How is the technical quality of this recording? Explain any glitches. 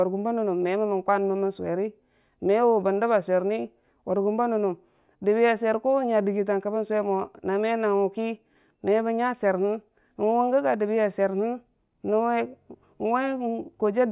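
No technical faults are audible anywhere in the speech recording, so there are no glitches to explain.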